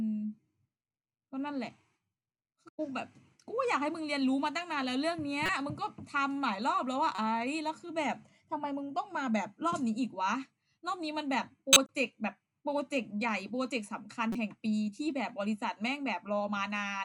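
Speech, with four short bursts of corrupt frame decoded: around 5.46 to 5.49 s, 7.15 to 7.19 s, 11.73 to 11.89 s and 14.32 to 14.36 s. Damaged compressed frames got played anyway, so energy lands at the wrong frequencies for about two frames in most of them. The 11.7 s one spans several frames and is noticeably louder.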